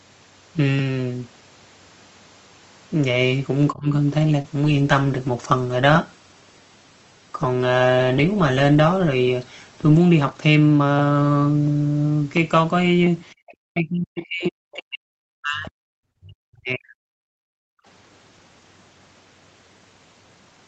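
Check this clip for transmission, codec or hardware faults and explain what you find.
Several call faults appear, clustered around 4 s and between 13 and 18 s, all typical of an Opus call path whose band already stops at 8 kHz.

Speech suppressed in double talk, likely, at 3.72–3.93 s (about 20 dB down), 13.74–15.77 s and 16.21–17.27 s (about 40 dB): the speech itself sinks as the canceller clamps both sides. This differs from background gating because the talker, not the room, drops.

Short concealed packet loss at 4.42–4.46 s: about 20 ms went missing and the decoder extrapolated the previous sound, leaving a brief smear rather than a level dip.

Call bitrate drop from 4.65 to 11.25 s: the encoder fell from 32 to 15 kbps for nearly six seconds, so the speech turns coarse and watery throughout, unlike the momentary concealment smear.

Background gated by the echo canceller at 13.35–13.46 s (about 34 dB) and 17.55–17.85 s (about 40 dB): the room tone drops out briefly while the loudspeaker plays.

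Other side's voice leaking through at 13.48–13.54 s: a faint scrap, roughly 30 dB below the speech, of a second voice the canceller likely missed. It is added sound, not a dropout.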